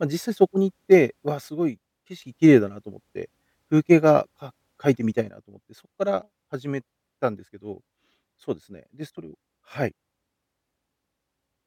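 At 1.49 s the level drops abruptly by about 9 dB. It stays down until 2.22 s, then snaps back up. A second drop of about 9 dB hits at 5.29 s and lasts to the end. Both are sudden gain jumps. The speech and the background noise fall together in a single step, with no fade. The likely cause is a digital gain setting applied instantly, with no ramp between samples.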